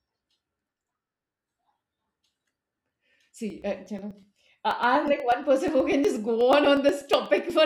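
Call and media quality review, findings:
Periodic USB or driver dropouts, 0.11–7.50 s. Regular ticks every 0.121 s, only under speech. Bus or driver stalling on a timer, skipping a few ms of audio each time, around seventy gaps total. Check background tasks polling the USB audio device.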